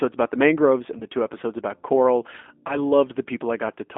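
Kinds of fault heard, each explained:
G.729 codec: This is a low-rate VoIP speech codec. It rebuilds speech from a vocal tract model, a pitch predictor and a few pulses per short frame. Here the speech sits in a narrow telephone band of 250 Hz to 3.5 kHz. The coding damage is plainly audible. Voices sound rough, thin and slightly synthetic, which fits an 8 kbit/s G.729A stream.
VoIP packet loss concealed by the speech codec: Packets went missing and the decoder filled the gaps by extending its last pitch and filter settings at falling gain. It happens twice, at 0.99 to 1.02 s and at 2.67 to 2.87 s. Each gap points to about 20 ms of lost audio. The speech turns briefly smeared. The second disturbance lingers longer, since each frame builds on the damaged one before it.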